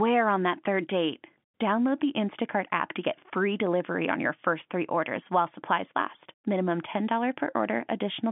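Nothing's wrong here: it's speech over an ordinary telephone line, G.711 telephone coding with the usual band of roughly 150 Hz to 3.5 kHz and nothing above about 3.7 kHz, which is just how a phone call sounds.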